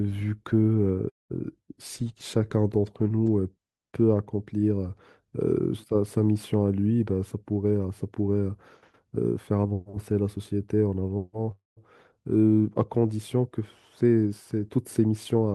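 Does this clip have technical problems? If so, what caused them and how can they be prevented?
Yes. Call audio freezes at 1.09–1.32 s and 11.51–11.79 s: the sound stalls briefly, fades to silence, then resumes where it stopped. Packets were likely delayed and the jitter buffer ran empty. A steadier network path, with jitter kept low through traffic prioritisation, prevents this.

Jitter buffer speed-up at 6.99–8.50 s (110%) and 9.51–9.73 s (114%): delayed packets arriving together overfilled the buffer. The receiver trimmed pitch-period slices, about 150 ms and 40 ms in total, so speech sounds hurried at unchanged pitch. A network with less burst delay avoids the backlog that triggers this.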